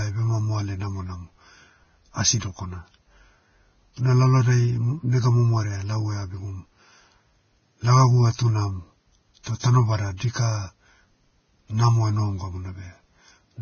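Vorbis compression damage runs through the whole speech clip and is likely the cause of its sound. Nothing is present above 6.5 kHz. The treble below that cut-off has been quantised so coarsely that fine detail turns into hiss-like noise of similar energy. The speech sounds grainy and hissy, with roughened tones and smeared consonant attacks. The damage is heavy, which fits a very low bitrate of around 17 kbps.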